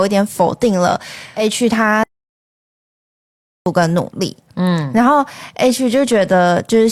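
At 2.03 s the speech cuts out in mid-flow and the output stays silent until 3.66 s, about 1.63 s. This is a playback stall. The player likely ran out of data or had its thread blocked. Sound then resumes.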